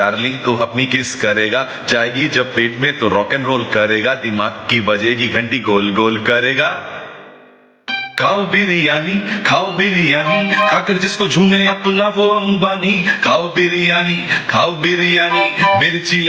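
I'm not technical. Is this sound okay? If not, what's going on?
No, there's gain pumping the whole way through: loud and soft parts end up squashed closer together in level, likely from a compressor fighting far too much input gain.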